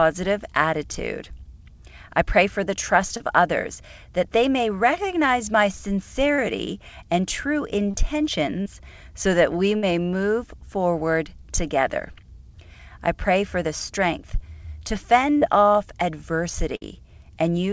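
Brief smears or wobbles at 3.17 s (after "pray for the trust"), 6.35 s, 7.91 s, 8.62 s (before "so that we") and 15.37 s are short concealed packet losses. About 30 ms of audio arrived too late each time, and the receiver bridged the gap by extending the preceding sound. At 9.76 s, just after "so that we", and again at 16.76 s, a held buzz or fading hiss lasts roughly 50 to 60 ms before the audio resumes further on. These are bursts of packet loss: about 60 ms of consecutive audio was lost, and the continued sound was faded down across the gap. Throughout, the WebRTC call path leaves nothing above 8 kHz, which fits a G.722 wideband codec.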